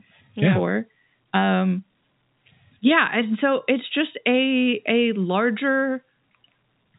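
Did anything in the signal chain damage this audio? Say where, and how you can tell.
No, nothing in the chain damaged this speech.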